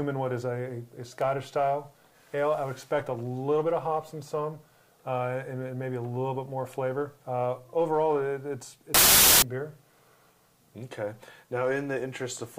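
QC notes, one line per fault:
8.94–9.42 s, wrong sample width: sound stored as 16-bit integers is read back as packed 24-bit integers, so each 3-byte group straddles parts of neighbouring original samples. Most resulting values are assembled from mismatched bytes, and only some keep the real signal's top bits. The result is loud noise with the original buried inside it. It runs 1.5 times too fast and at a correspondingly higher pitch.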